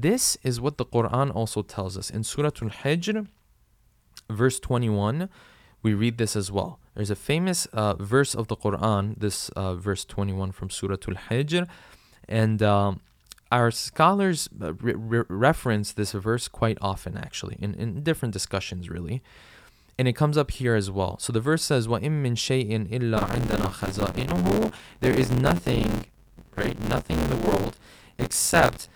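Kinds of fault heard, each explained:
Buffer tearing: the writer and reader of the audio buffer cross each period, so about a third of every block repeats sound around 20 ms old. Hard joins give a steady 86.1 Hz rattle, fitting a 512-sample buffer, present only with speech, unlike scattered clicks.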